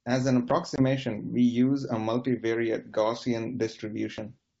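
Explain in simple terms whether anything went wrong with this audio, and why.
At 0.76 seconds the sound drops out in a short, hard-edged gap, and when it comes back just after, it is slightly rough until about 0.83 s. This is packet loss on an ADPCM call. About one packet, roughly 20 milliseconds of audio, never arrived and was filled with silence. Because this kind of coding predicts each moment from the last, the receiver lost track and needed a few tens of milliseconds to catch up.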